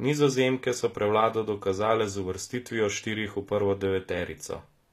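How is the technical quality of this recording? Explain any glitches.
The quality takes a clear hit from one fault that runs the whole way through this speech clip: HE-AAC compression, plainly audible from start to finish. The top end sounds bright but synthetic, and s sounds come out gritty and a bit lispy, with a metallic sheen. That's likely spectral band replication at work: the codec keeps only the lower spectrum and fakes the treble by copying lower bands upward, so the harmonics don't line up. The damage fits a low bitrate around 24 kbps.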